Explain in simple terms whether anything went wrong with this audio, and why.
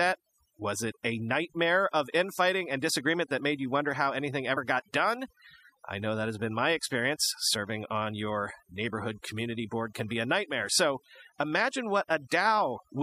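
The background has dropped and broken up into twinkling specks from start to finish. This is overdone noise removal: a noise reduction tool set too strong switched off quiet frequency bands, taking soft parts of the voice along with the noise.

At 4.56 s, between "you wonder how anything" and "got done I know", the speech jumps ahead slightly. This is compressed frames skipped: about one frame of the compressed audio, a few hundredths of a second, was never played, so playback jumped past it.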